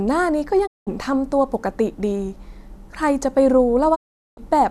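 Digital broadcast dropouts mute the speech from 0.65 to 0.89 s and again from 3.94 to 4.39 s. Each time the receiver stopped getting valid frames and muted with a quick 20 ms fade, losing what was sent. The gaps fit roughly 190 ms and 410 ms of lost frames.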